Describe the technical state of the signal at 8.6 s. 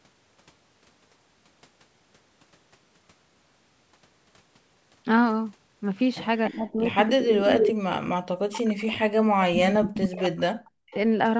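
The speech is ducked, thinning and dropping out by up to about 40 dB between 6.5 and 10.55 s, likely speech suppressed in double talk as the echo canceller turned down its own talker along with the loudspeaker echo. Over this, from 8.56 to 8.84 s, a faint copy of the speech about 15 dB down trails 291 ms behind, likely an echo leak from loudspeaker pickup the canceller missed.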